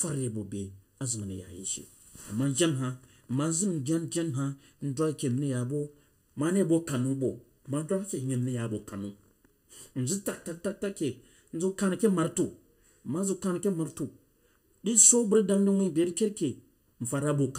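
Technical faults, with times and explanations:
Throughout, channel delay (comb filtering): one channel runs late by a little under a millisecond, and when the two are folded to mono the shared speech cancels at regularly spaced frequencies, the first notch falling near 700 Hz, with further notches repeating upward through the kilohertz range. Those fixed gaps carve out parts of the vowel and presence region, so the voice sounds hollow and phasey, as if heard through a tube, for the whole clip.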